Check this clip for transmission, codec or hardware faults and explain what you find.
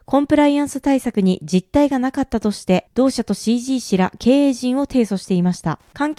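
There's one fault here: Wi-Fi interference from 4.14 s to the end of the speech. A nearby Wi-Fi radio's beacon, every 102.4 ms, gets rectified by the audio circuit, so you hear faint, steady ticking about ten times a second, well below the speech.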